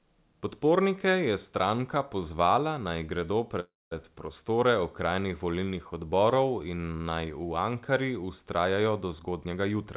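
A call audio freeze runs from 3.6 to 3.94 s, just after "stranka pozvala naj gredo" and before "prostore okrajnih volilnih odborov". The likely cause is that packets were held up and the jitter buffer ran dry. The receiver stretched the last sound into a short fading tail, then about 210 ms of silence, filling 312 ms in all. The speech resumes exactly where it stopped, with nothing lost, but everything after arrives 312 ms later.

A jitter buffer speed-up follows from 9.23 to 9.77 s. With more audio queued than it wanted, the receiver trimmed repeated pitch-period-sized slices, roughly 70 ms altogether, to pull the delay back down. Playback runs at about 112% speed while the pitch stays unchanged, so the closing speech sounds hurried. The band-limited telephone tone, with nothing above 4 kHz, fits the G.711 A-law call path.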